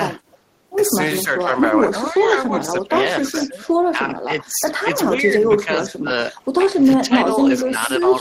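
A faint delayed copy of the speech surfaces at 0.30 to 0.36 s, returning about 440 ms behind the original and sitting far beneath it. This is an echo leak, likely from a far-end loudspeaker whose echo canceller let part of the microphone pickup slip through and sent it back. The same copy, at the same roughly 440 ms delay, recurs louder at 2.08 to 2.29 s, still well under the speech, and loudest at 7.60 to 7.94 s, where it sits about 10 dB below the speech.

Between 1.41 and 8.1 s the speech repeatedly dips and thins, adding up to around two seconds of weakened passages, at worst falling by about 15 dB. This is speech suppressed in double talk. The likely cause is that both sides were speaking at once and the echo canceller, unable to tell the local talker from loudspeaker echo, turned everything down together.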